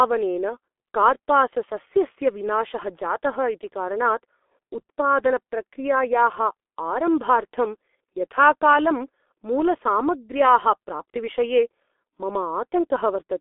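G.723.1 codec damage runs through the whole speech clip: nothing survives above about 3.5 kHz or below 250 Hz, and the low bitrate, which fits about 6.3 kbit/s, leaves a heavily muffled, hoarse sound, because the coarse 30 ms frames update the voice model slowly and smear consonants.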